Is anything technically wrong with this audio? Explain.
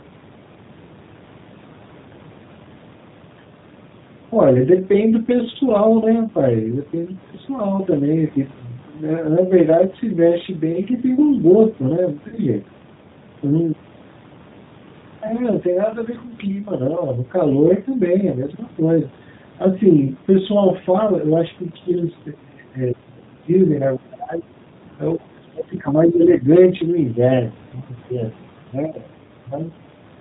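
Yes. There are three kinds of fault.

G.729 codec damage runs through the whole speech clip. The coding points to G.729A at 8 kbit/s. It rebuilds the voice from a vocal tract filter, a pitch predictor and a few pulses per frame, so fine detail is lost. Nothing above 4 kHz gets through. The result is plainly audible. The speech sounds muffled, slightly rough and synthetic throughout.

VoIP packet loss concealed by the speech codec occurs from 12.28 to 12.38 s. About 40 ms of audio went missing, which fits two 20 ms packets. The decoder filled the gap by extending its last pitch and filter settings while lowering the gain. That part turns buzzy and smeared, then fades. The voice stays weak and distorted briefly after real audio resumes.

Speech dips three times, from 22.34 to 22.70 s, 22.92 to 23.50 s and 23.97 to 24.54 s. The deepest drops are about 25, 30 and 25 dB. The likely cause is speech suppressed in double talk. 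The echo canceller could not separate the talker from returning echo while both sides spoke. So it turned the signal down. The voice sinks in these spans.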